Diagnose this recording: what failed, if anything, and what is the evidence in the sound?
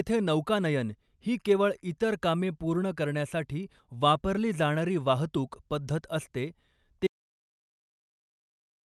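At 7.07 s the speech cuts off mid-flow and never returns; everything to the end is an audio dropout to silence, with no room tone at all. The likely cause is lost input at the capture stage, such as a disconnected device, a failed link or a stray mute, with the recorder still writing silence. A noise gate or comfort noise would leave some floor, and network packet loss in the call path would show concealment artefacts and recover. The high end, rolled off near 12 kHz by the call codec, stops with everything else.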